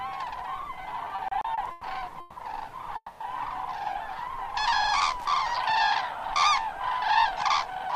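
Everyday sounds make up the clip, and between 1.05 and 1.84 s they drag and stutter through seven brief hitches, the longest about 110 ms, where the last sound is stretched out rather than anything dropping away. These repeated stalls (stutter) come from packets arriving late or slower than playback, so the jitter buffer kept running dry and the receiver padded about 250 ms in total, roughly a third of that span, while nothing was lost. Two call audio freezes follow, at 2.20 to 2.38 s and 2.96 to 3.22 s. In each, the sound hangs and smears into a fading buzz or hiss before carrying on from exactly where it stopped, and the second one dies out into about 50 ms of silence first. The likely cause is packets held up in transit, emptying the jitter buffer and adding 160 ms and 240 ms of delay respectively, with nothing missing afterwards, so the audio is simply pushed later. From 5.20 to 5.27 s a short, irregular burst of scratchy crackle breaks in. 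That is loose connector crackle, a worn or dirty contact rapidly making and breaking as it shifts, chopping the signal into rough fragments.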